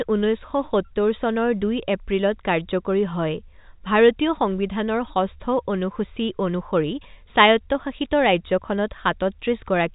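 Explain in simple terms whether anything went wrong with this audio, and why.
Nothing went wrong here.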